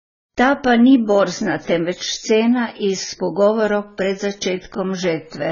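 Speech, with heavy AAC compression damage throughout. Nothing is present above 7 kHz, so the sound is dull and muffled, and the remaining band has a smeared, warbling texture with fizzy sibilants. The likely cause is AAC-LC encoding at a very low bitrate, consistent with roughly 16 kbps. At that rate the encoder lowers its cut-off and quantises the frequency lines so coarsely that it leaves gaps in the spectrum that shift from frame to frame.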